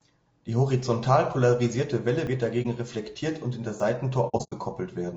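Low-delay AAC compression runs through the whole speech clip and likely comes from AAC-ELD at about 32 kbps. Its short frames resolve the pitch harmonics poorly, so the voice sounds plainly rough and grainy, with noise between the harmonics and a synthetic-sounding top band. A dropped buffer (overrun) occurs at 2.27 s and again at 3.8 s. Each time the sound jumps ahead as the two sides of the gap are butted together. The first skip is about 10 ms and the second about 20 ms, which fits what you hear when a program likely fails to read its samples before the hardware overwrites them. AAC frame loss with muting is heard from 2.62 to 2.66 s as a brief 30 ms dip, which fits a single zeroed frame faded by the overlapping windows. From 4.28 to 4.54 s there are repeated dropouts: 180 ms of sound goes missing in pieces across about 240 ms, the longest run lasting around a tenth of a second, which points to several frames lost in a burst.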